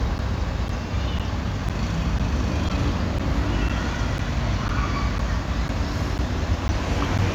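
A background task appears to be stalling the USB bus or audio driver every 0.5 s, producing periodic USB or driver dropouts in this recording of sounds. From 0.18 s to 7.19 s, about fifteen times, roughly 10 ms of audio is lost and replaced with silence. Each gap cuts the waveform abruptly and then resumes it, so the audio carries a steady train of ticks or small pops twice a second, audible only where there is signal.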